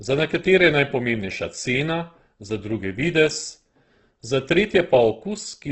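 From start to finish the speech sounds rough and grainy, with a noisy, sandpapery texture laid over its tonal parts and nothing above about 8.3 kHz, so the top end is dull and closed in. This is likely Opus compression in its music-oriented CELT mode, starved at a bitrate that fits roughly 12 kbps: band energies are kept, but their fine detail is rebuilt from folded lower bands or noise, which gives the grain instead of swirling holes.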